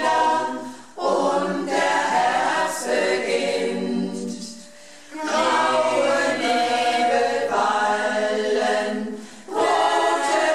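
No technical faults can be heard anywhere in the audio, and the signal stays intact throughout.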